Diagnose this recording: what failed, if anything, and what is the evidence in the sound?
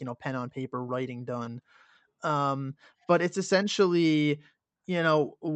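Short concealed packet loss at 1.43 to 1.47 s, just after "pen on paper writing". At the network stage, about 20 ms of the call reached the Opus decoder too late. The receiver extended the preceding sound across the gap and blended back, leaving a brief smear.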